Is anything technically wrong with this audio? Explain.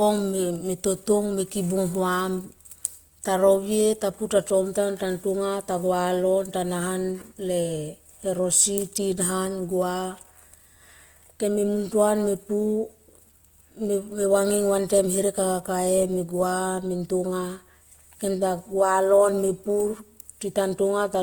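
Yes. Throughout the speech there is plainly audible Opus compression. The grainy, rough texture points to the codec's music (CELT) mode at a low rate, likely around 24 kbps. Where bits run short, bands are filled with folded copies of lower bands or with noise, so harmonics turn hissy rather than hollow. A spectrogram shows the full band, but with smeared, noise-like texture between and over the harmonics instead of clean lines.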